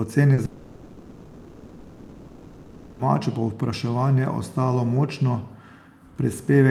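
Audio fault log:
0.33–0.39 s, short concealed packet loss: about 40 ms of audio failed to reach the decoder in time. The receiver extended the preceding sound across the gap and blended back into real audio, leaving a brief smear or wobble where that fragment should be.
0.45–3.01 s, long network dropout: about 2.5 s of audio is absent, likely from incoming packets stopping. The receiver filled the whole gap synthetically, first extending the last sound as a fading buzz or hiss and then holding low steady noise rather than true silence. Speech resumes at "povpraševanje ostalo močno", with the lost portion never played.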